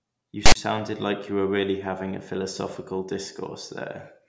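File tags played as audio from 0.46 to 0.55 s interrupt the speech. A block of text tags was decoded as samples, so the character bytes come out as a loud, lopsided rasp offset to one side, followed by dead silence from the zero padding, all with abrupt hard edges.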